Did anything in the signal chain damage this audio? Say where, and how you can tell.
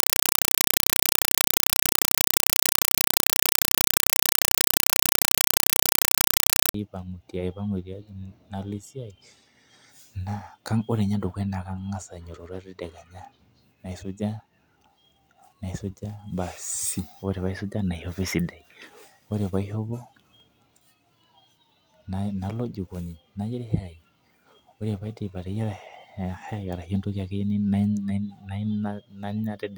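Yes. Playback link, 0.0 to 6.74 s: compressed stream played as audio. Loud static replaces the speech, with 4 ms bursts at 31.25 Hz, which fits an undecoded AC-3 bitstream.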